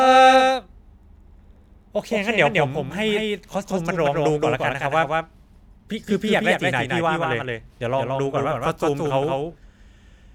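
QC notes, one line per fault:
Throughout, doubled audio track: every syllable of the speech is followed by a second, full-band copy roughly 150 ms later and a few decibels quieter, giving a flat slapback with no decay or room colour. The fixed lag and clean, untouched copy suggest the same signal is mixed in twice, likely because it was captured again through a slower path or an edit left two copies running out of step.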